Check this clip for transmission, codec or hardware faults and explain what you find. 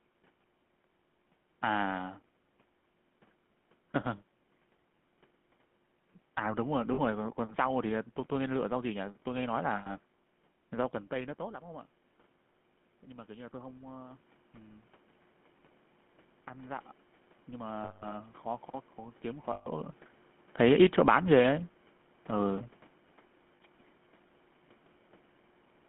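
Three kinds of fault are present: GSM full-rate coding throughout, five lost GSM frame bursts, and one automatic gain rise.

GSM full-rate codec, throughout: the pulse-excited vocal-tract coding, consistent with 13 kbps full rate, leaves the speech plainly buzzy and gravelly, with nothing above 3.4 kHz.

Lost GSM frames at 6.94 s (40 ms), 9.76 s (100 ms), 17.84 s (180 ms), 19.52 s (140 ms) and 23.56 s (40 ms): the decoder repeats the last good frame, producing a rough, metallic ring.

Automatic gain rising from 13.08 to 14.93 s: the gain control, reacting to a much quieter input, lifts its gain by about 4 dB, so voice and background swell together. The level shifts near 11 s and 19.5 s come from the talker moving relative to the microphone, and the steady background is room noise.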